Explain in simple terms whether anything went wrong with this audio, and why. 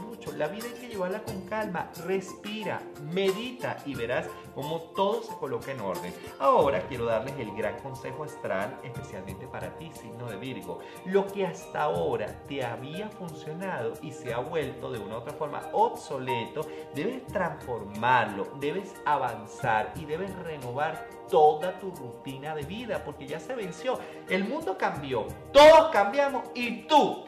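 Nothing went wrong; no faults can be heard.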